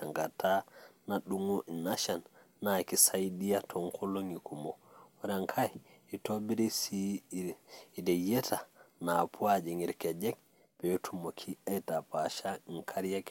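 A short stretch of speech, and nothing in it sounds technically wrong at any point, so there's no fault to point to here.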